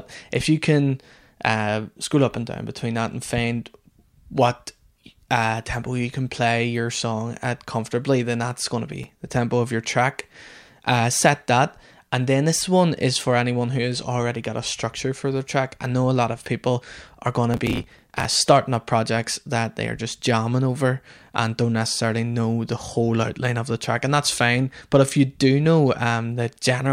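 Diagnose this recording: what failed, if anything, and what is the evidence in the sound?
Processor overload crackle at the buffer stage: runs of roughly 5 ms buffers missed their deadlines and were skipped, tearing the speech at 8.92–9.20 s and 17.54–18.25 s.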